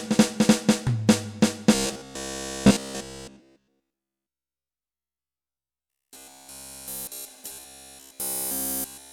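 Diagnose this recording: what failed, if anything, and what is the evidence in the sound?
Robotic sound from repeated short buffers at 1.75–4.68 s, 4.95–7.27 s and 7.52–9.13 s. The audio locks into a rigid 66.8 Hz buzz, with essentially nothing new passing through. That pitch fits a 15 ms block being replayed, likely from a starved driver buffer.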